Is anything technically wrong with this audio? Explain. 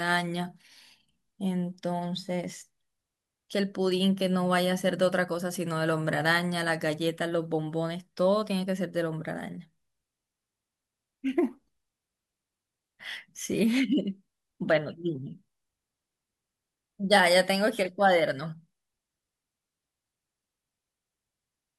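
No, nothing technically wrong turns up anywhere in this speech recording, so there's no fault here to point to.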